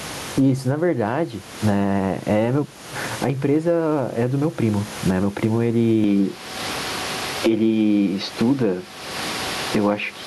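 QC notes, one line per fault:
Throughout, gain pumping: a gain swing of roughly 20 dB, so loud and soft passages sit close in level and the speech sounds squashed, likely from input gain set far too high with a fast limiter pulling it back.
6.04 to 10.27 s, input switched to a poorer device: with no gap at the change, the speech turns dull and boxy, with nothing above 6.4 kHz, level shifts by around 5 dB and a new noise floor sits roughly 30 dB down, likely a change to another microphone or headset.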